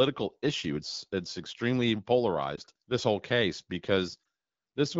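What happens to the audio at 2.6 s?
A lost AMR speech frame at 2.56 to 2.59 s: the decoder concealed one 20 ms frame with the last good settings at lowered gain, causing a brief dip or warble just before "this whole case".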